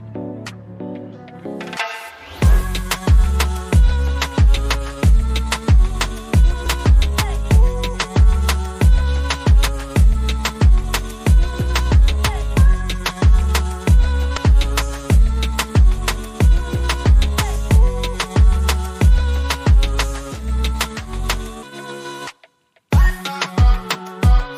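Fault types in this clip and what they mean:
Compressed frames skipped: whole coded frames never get played, so the sound jumps ahead roughly 150 ms twice and 70 ms once.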